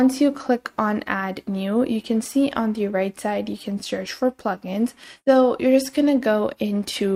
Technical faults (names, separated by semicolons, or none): none